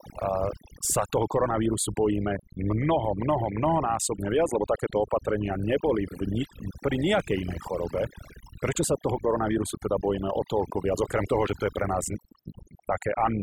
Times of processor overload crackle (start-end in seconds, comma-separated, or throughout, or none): none